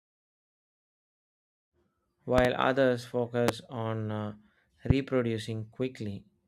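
Loud pops hit the speech: a double pop at 2.38–2.48 s, one at 3.48–3.51 s just before "on uh", and one at 4.90–4.93 s just after it. Each shows as a spike about 20–25 dB above the speech and a full-height vertical stripe on a spectrogram. The likely cause is a voltage spike, such as from a switch, a plug or static.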